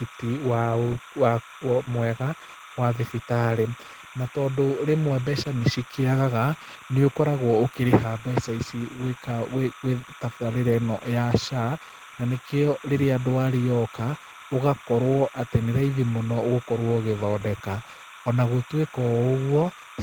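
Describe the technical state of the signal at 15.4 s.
At 15.4 s the speech carries timecode bleed, as it does for the whole clip. A thin, steady chirping warble sits behind the voice, about 20 dB below it. Linear timecode from a nearby track or cable is leaking in. Its square wave flips between pitches around 1 kHz and 2 kHz. The chirp repeats at a rate that fits 30-frame code, giving it a regular rhythm.

Opus voice compression is also present throughout, and its damage is plainly audible at this point. The speech sounds hoarse and slightly robotic. The texture points to a low rate, around 16 kbps. The codec is running in hybrid mode. A linear-prediction layer codes the band below 8 kHz, and a transform layer handles the top. The band stays full, reaching about 20.2 kHz. The coarse coding works in 20 ms frames.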